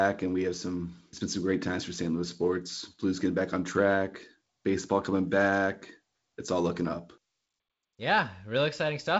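Nothing stood out on listening, with the speech carried over G.722 wideband telephone coding that leaves no content above about 7.7 kHz.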